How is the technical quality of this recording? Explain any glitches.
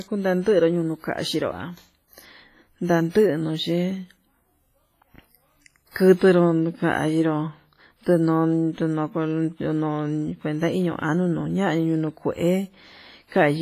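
The recording is speech with heavy codec damage running from start to finish. Throughout, the sound rings and smears, with a washy hiss that swells and fades along with the speech, and there is nothing above 15.2 kHz. This is most likely WMA compression at a low bitrate, around 24 kbps judging by the damage. The transform codec's long blocks spread quantisation noise over tens of milliseconds around each sound, and weak spectral lines are zeroed, leaving the thin, ringing texture.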